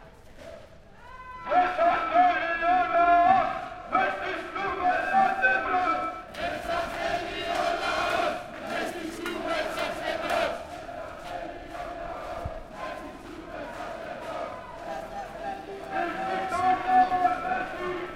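Periodic clock jitter runs through the whole clip. Interference at roughly 1 kHz shakes the converter's timing. Each component gains sidebands spaced about 1 kHz above and below it, strongest on high content. The sound carries a rough, metallic edge that disappears in silence.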